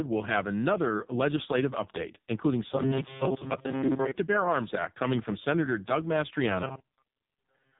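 From start to finish the speech carries heavy AMR narrowband mobile codec damage. Nothing above about 3.8 kHz survives, and the vocal-tract model, starved of pulses, renders the voice buzzy and synthetic, which fits AMR-NB's lowest 4.75 kbps mode.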